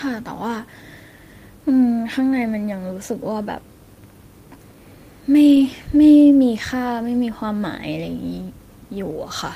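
Several separate packets went missing from this speech recording's stream around 5.47 to 5.65 s. That points to five 20 ms Opus frames. Each lost packet was recovered by lost packet rebuilding from error correction: the decoder played the low-bitrate copy carried in the following packet. About 100 ms of audio was reconstructed this way, so there is no gap or dropout, but that stretch sounds rougher and noisier than the surrounding speech.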